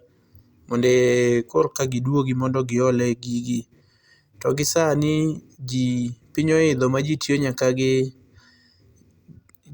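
No technical faults are audible.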